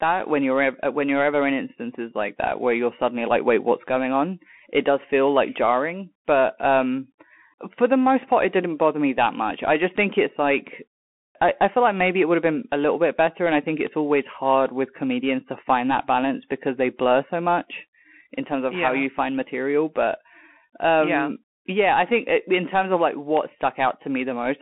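From the start, the speech carries Bluetooth CVSD headset codec damage. The band sits at roughly 200 Hz to 3.5 kHz, with nothing above 3.8 kHz. Unlike a simple low-pass, the s sounds turn scratchy and a granular hiss rides under the voice. That comes from one-bit up-down coding whose adaptive step can't keep pace, consistent with a 64 kbps stream.

At 9.98 s, between "that much I just" and "think it's like I", a bit error spike gives one sharp, broadband tick. A flipped bit made a couple of samples jump by a power of two and snap back. Nothing drops out around it, which separates it from a dropout click.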